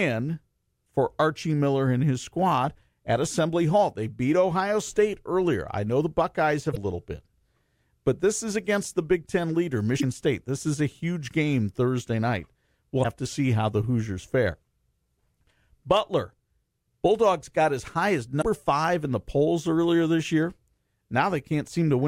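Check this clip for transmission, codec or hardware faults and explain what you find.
Damaged data in a compressed stream occurs four times in this speech, at 6.70–6.77, 9.97–10.04, 13.00–13.05 s (just before "to see how the") and 18.38–18.43 s (between "got as high as" and "five in the polls"). Corrupted bytes make the decoder misread frames and lose sync while it hunts for the next header, so each 50–70 ms stretch comes out as a brief chirp or squawk.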